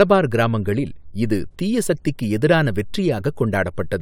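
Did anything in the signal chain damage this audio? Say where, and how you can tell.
No, nothing in the signal chain audibly damaged this speech recording, and the signal stays continuous and stable throughout.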